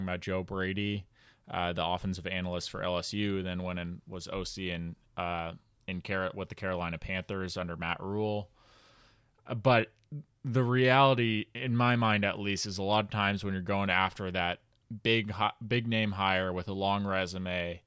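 Speech recording; no audible technical faults anywhere.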